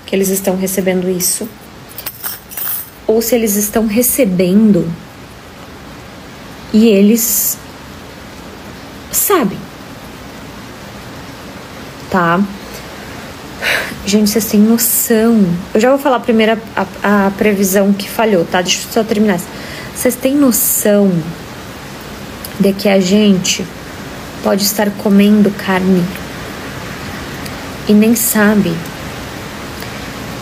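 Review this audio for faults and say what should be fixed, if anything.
No faults; nothing needs fixing.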